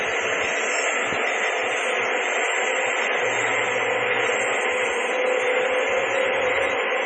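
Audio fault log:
Throughout, MP3 compression: a low-bitrate MP3 encode, likely around 24 kbps, ran short of bits, cut the treble and dropped weak frequency lines frame by frame. Nothing survives above about 8.7 kHz, and the heavy damage leaves the sound dull, watery and swirling, with smeared attacks.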